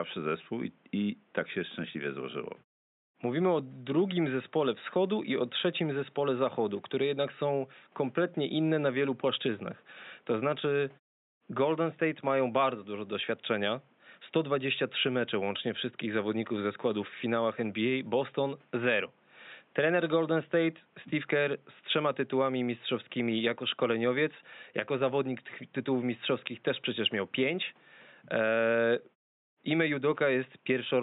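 No technical faults can be heard in this speech recording.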